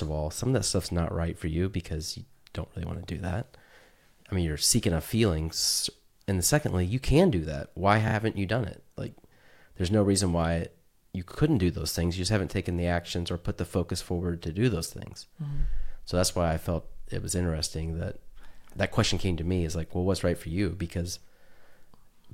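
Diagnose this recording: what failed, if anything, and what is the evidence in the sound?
Stutters at 8.08–8.14 s, before "you done it", and 11.31–11.38 s, after "no reason why you": repeated frames, one 32 ms codec block replayed twice more.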